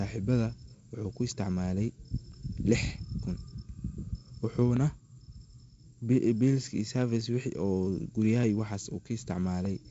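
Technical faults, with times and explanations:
1.10 to 9.65 s: clock drift buffer slips, a click recurring every 1.22 s, about seven in all. Two device clocks likely disagree by several hundred ppm, so the buffer periodically drops or repeats a few dozen samples, breaking the waveform.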